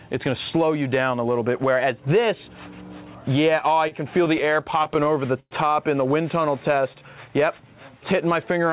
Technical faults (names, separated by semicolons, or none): repeated stalls (stutter); jitter buffer slow-down